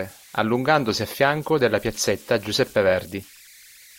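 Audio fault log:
Throughout, converter idle tones: a whistle around 2 kHz rides under the speech and surfaces in the pauses, sitting about 27 dB below the signal, with a grainy texture beneath the quieter passages. The delta-sigma converter runs without dither, so when its input is small its modulator settles into repeating bit patterns rather than random ones. Those cycles produce a tone whose pitch is set by the input's offset, and it becomes audible when nothing louder masks it.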